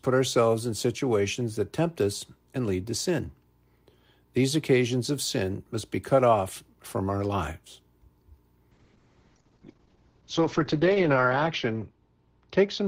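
From 8.76 s to the end, a call bitrate drop sets in. The encoder falls from 40 kbps to 7 kbps and stays at its lowest for 2.35 s, so the speech turns rough and muffled. A spectrogram shows everything above 8 kHz cut away.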